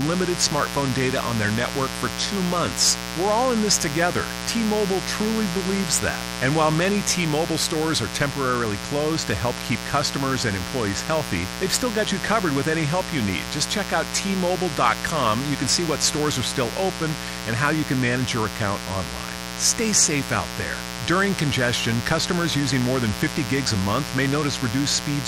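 Speech sits on top of a mains buzz running the whole way through, a steady raspy drone based on 60 Hz with harmonics climbing well into the kHz range. It's loud, only about 10 dB under the talker, the kind of spiky interference a dimmer, rectifier or unshielded cable lets in twice per mains cycle.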